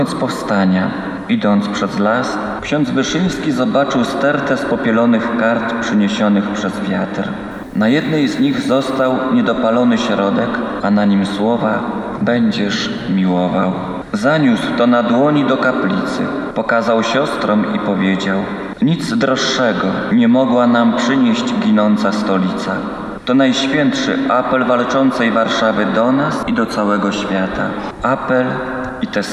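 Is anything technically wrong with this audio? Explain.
Yes. From 7.51 to 9.11 s the audio drops to low bit depth with dither, with the resolution consistent with about 9 bits. Dither noise is added before each sample is rounded to so few levels, so the rounding error turns into a steady, even hiss, around 40 dB below the signal, with no distortion. On a spectrogram this shows as a flat, uniform haze across all frequencies for that stretch. The waveform carries a thin, constant fuzz even in quiet moments.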